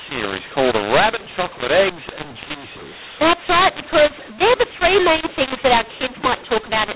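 Telephone speech, G.711 coded, with mu-law and A-law mixed up throughout. Samples written as mu-law are read as A-law. Levels are scrambled, the sound is harsh and distorted, and pauses fill with noise.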